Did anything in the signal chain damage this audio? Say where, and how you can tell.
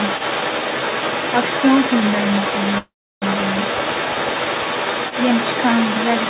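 Yes. Overdone noise removal runs throughout, from call processing: an over-strong suppressor shuts off bands near its noise estimate, leaving twinkling specks.

Other side's voice leaking through, across the whole clip from 0 to 6.3 s, in echo cancellation: a second voice sits only a little below the talker, likely loudspeaker echo the canceller left behind.

Call audio freeze, 2.78 to 3.24 s, in the network and jitter buffer: 438 ms of fading fill, 320 ms of it silent, then speech resumes with nothing lost, likely from delayed packets.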